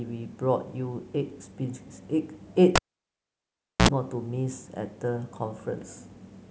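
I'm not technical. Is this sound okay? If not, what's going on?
No. At 2.76 s a live cable was pulled out and pushed back in, a cable pulled and plugged in fault. You hear a pop, then the speech drops to near silence for about 1.1 seconds. While only the plug's tip touches, it picks up a short 65 ms burst of 60 Hz mains buzz, a low electrical hum. A second pop follows at 3.89 s as the sound returns.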